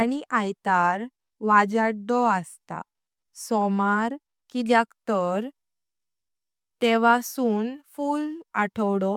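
A short piece of speech, and nothing in it sounds technically wrong at any point.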